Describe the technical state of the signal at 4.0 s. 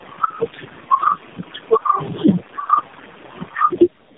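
At 4.0 s you're still hearing gain pumping, which runs through the whole clip. The background noise sits about 36 dB under the speech, and the gain swings by roughly 10 dB. Loud and quiet parts end up squashed close together. The likely cause is mic gain set far too high, with a fast limiter or compressor clamping down on every loud syllable.

The other fault, also present for the full clip, is tandem speech coding. The speech sounds rough, muffled and a bit warbly, with nothing above 3.7 kHz. That degradation points to the call being decoded and re-encoded across several network links, with three low-rate speech codecs in a row, the last one sounding like AMR-NB. Each codec chews on the previous one's already damaged output, so the artefacts stack up and sound worse than any single link would.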